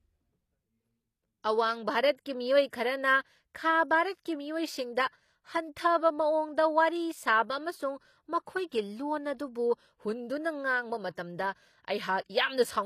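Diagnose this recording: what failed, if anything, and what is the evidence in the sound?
The codec stage is at fault across the whole speech recording, most likely HE-AAC compression at a low bitrate, which fits roughly 24 kbps. The damage is plainly audible. The upper band sounds synthetic, with s sounds coming out gritty and metallic, and nothing is present above 14.9 kHz. Only the lower spectrum is coded directly. The treble is rebuilt by copying lower bands upward under a coarse envelope, so its harmonics no longer match the original.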